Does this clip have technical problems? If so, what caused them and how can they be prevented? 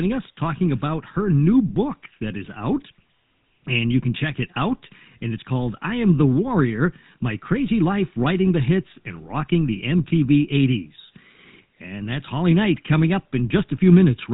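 Yes. GSM full-rate codec coding runs throughout: pulse-driven vocal-tract modelling gives the speech a buzzy, gravelly roughness, consistent with about 13 kbps, and the spectrogram shows nothing above 3.9 kHz. To prevent it, capture or route the speech through a wideband path rather than a GSM-era narrowband codec.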